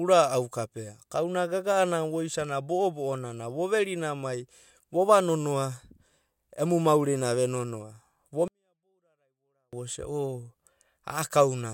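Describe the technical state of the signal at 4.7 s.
At 4.7 s the signal is intact, with no audible fault at that point in the speech.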